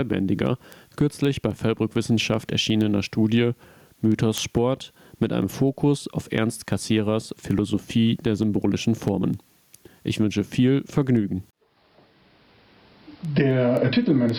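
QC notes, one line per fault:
Throughout, gain pumping: input gain likely set far too high, so a fast limiter clamps each loud sound, making the gain swing by around 10 dB and squashing loud and soft parts closer in level.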